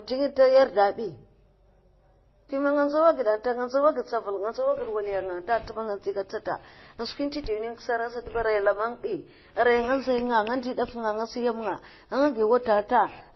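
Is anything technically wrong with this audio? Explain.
Yes. Transcoding between lossy codecs runs throughout the speech. Nothing remains above 5.8 kHz, leaving it dull. Layered smearing and watery, swirling artefacts combine. This likely comes from several low-bitrate encodes ending in Opus, each spending bits on earlier damage, adding its own, and keeping the lowest cut-off.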